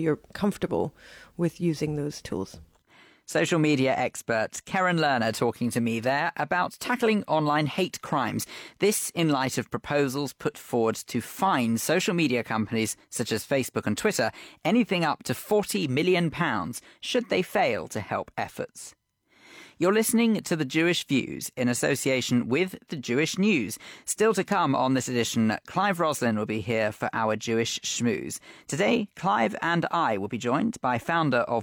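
Nothing stood out on listening to this speech recording.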